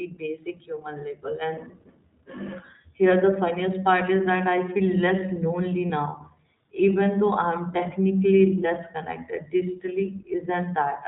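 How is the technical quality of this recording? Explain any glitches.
The quality is limited by an iLBC codec throughout, plus one brief dropout.

iLBC codec, whole clip: Narrowband coding removes everything above 4 kHz. The speech sounds clear but rough and synthetic, which fits the 20 ms, 15.2 kbps mode.

Lost iLBC frame, 5.88 to 5.90 s, just after "less lonely": A single 20 ms frame goes missing. The decoder repeats the last pitch cycle with added noise, which sounds like a short buzzy hold. Each iLBC frame decodes on its own, so the speech recovers almost at once.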